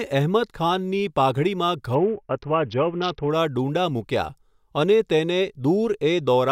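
From 1.95 s to 3.30 s a Bluetooth SBC bit pool drop starves the encoder, with the sound pointing to a fall from about 31 to 6, near 55 kbps. The upper sub-bands lose their bits, so the speech turns dull and gritty before clarity returns.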